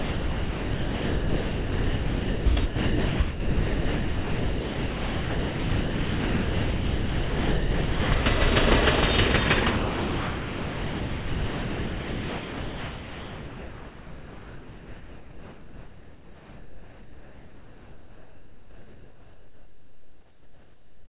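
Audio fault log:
0.00–2.46 s, 2.66–3.20 s, 3.30–8.12 s, 8.22–8.26 s, 9.78–21.13 s: sound dropped by the voice detector. The sound gives way to steady comfort noise, likely because the sender's detector classed it as background and stopped transmitting. The audio that does come through is band-limited to 4 kHz by the G.711 call path.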